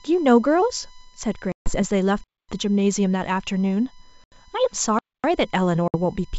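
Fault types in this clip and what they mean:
USB whine: Current drawn by the USB bus in regular frames leaks into the audio through the power or ground, leaving a steady tone of fixed pitch under the speech for the whole clip. The tone sits at 1 kHz, with its strongest component at the 9 kHz harmonic, about 30 dB below the speech. It is most exposed in the pauses.
Packet loss on an ADPCM call: Lost packets are replaced by silence. Because the ADPCM decoder's predictor and step size drift away from the sender's, the speech returns distorted or at the wrong level and takes some tens of milliseconds to settle. The holes fall at 1.52 to 1.78 s, with about 140 ms lost, at 4.24 to 4.32 s, with about 80 ms lost, and at 5.88 to 5.96 s, with about 60 ms lost.
Gap between chunks: The audio arrives in separate chunks with silence inserted between them, so each join becomes a hard-edged hole. No speech is lost, only pushed later. 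Two 250 ms gaps appear, at 2.24 to 2.49 s and at 4.99 to 5.24 s. Their regular spacing fits chunks of 2.5 seconds.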